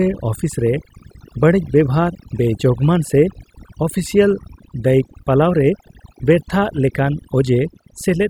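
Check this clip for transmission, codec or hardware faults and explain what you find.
Throughout the speech, the background sits at near silence dotted with twinkling specks. That is overdone noise removal: a reduction stage set too hard shuts off individual frequency bands near its noise estimate, taking quieter parts of the voice along with the noise.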